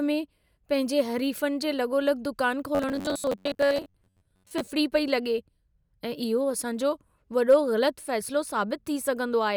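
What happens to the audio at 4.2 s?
At 4.2 s the sound is inside a stretch of robotic sound from repeated short buffers, running from 2.75 to 4.68 s just after "लॻोलॻि दुकान". About half the audio there is a replay of roughly 10.7 ms chunks, likely because new audio arrived too late. That fixed period imposes a rigid 93.8 Hz metallic buzz. On a spectrogram this appears as evenly spaced horizontal harmonics about 94 Hz apart. In the waveform, identical short cycles repeat.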